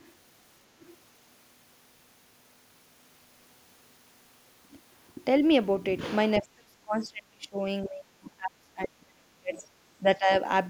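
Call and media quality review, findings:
Other side's voice leaking through: short, faint scraps of a second voice at 0.00–0.09 s, 0.81–0.88 s and 6.99–7.06 s, about 30–35 dB under the talker. Likely cause is residual echo from the far-end loudspeaker that the echo canceller didn't fully subtract from the mic.

Speech suppressed in double talk: the talker's level dips hard at 6.40–7.59 s (down about 35 dB, roughly a second affected), 7.83–9.65 s (about 30 dB, around a second and a half chopped) and 9.98–10.30 s (shallower, about 15 dB). These dips overlap the other side talking. Likely cause is the echo canceller mistaking near-end speech for echo and clamping the whole signal.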